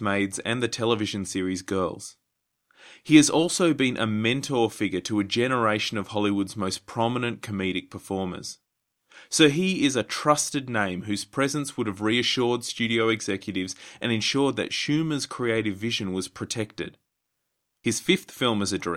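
Nothing in this speech recording stood out as a technical problem on listening.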